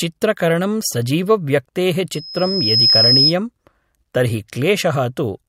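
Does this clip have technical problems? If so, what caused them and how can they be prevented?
Yes. A loudspeaker feedback squeal runs from 2.12 to 3.34 s. A 5.1 kHz tone swells over less than a second until it sits a few dB above the speech. The loop between microphone and loudspeaker gains at that frequency, and this swelling distinguishes it from a steady electrical whine. To prevent it, keep microphones behind loudspeakers and cut gain near 5.1 kHz.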